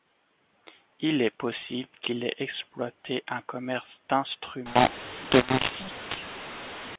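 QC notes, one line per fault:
4.66–6.96 s, mu-law and A-law mixed up: A-law telephone speech is decoded as mu-law, so every sample level is remapped wrongly and the speech turns harsh and gritty. Unlike clipping, which only damages peaks, the quiet gaps are lifted into steady hiss.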